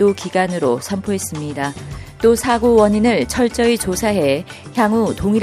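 No technical faults are audible.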